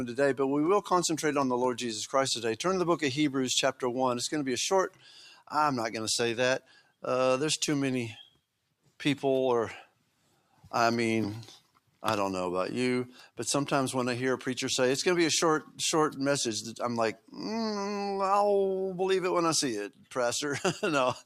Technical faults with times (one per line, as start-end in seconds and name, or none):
4.90-5.51 sound cut by the noise suppressor
6.60-7.03 sound cut by the noise suppressor
9.87-10.66 sound cut by the noise suppressor
11.60-12.02 sound cut by the noise suppressor
19.90-20.12 sound cut by the noise suppressor